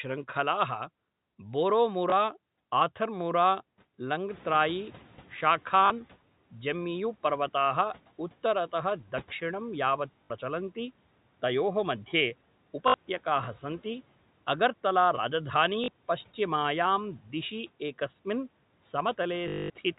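Packet loss with last packet repeated occurs at 2.10–2.12 s and again at 5.86–5.90 s: 20 ms and 40 ms of audio are replaced by repeated packets, giving a small blip and then a short robotic stutter. Between 4.3 and 6.16 s the noise suppressor is catching up. The room noise jumps by about 15 dB, passes through under-reduced at first, then sinks as the estimate adapts over 1.86 s, ending just before "जम्मियु पर्वताः उत्तरतः". More repeated-packet losses follow at 10.24–10.30 s and 12.88–12.94 s (60 ms each, a buzzy robotic stutter), at 15.84–15.88 s between "अगर्तला राजधानी" and "पश्चिमायां दिशि", and at 17.96 s after "अगर्तला राजधानी पश्चिमायां दिशि". The longest is 19.48–19.70 s, where 220 ms of repetition produces a sustained buzz near 50 Hz, which fits 20 ms packets.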